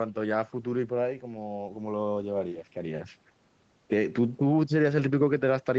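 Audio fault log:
Nothing to log here: the speech simply runs as it should, with nothing above about 8 kHz, which is just what a call path set to that bandwidth gives you.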